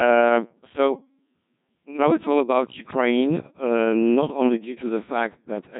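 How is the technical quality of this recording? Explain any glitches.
The quality is poor: throughout, the speech sounds robotic and buzzy, with heavy damage and nothing above 3.8 kHz. This is the Codec 2 vocoder at a very low rate, fitting its 1.6 kbit/s mode. It transmits only pitch, voicing, energy and spectral shape, then rebuilds the voice from sine waves.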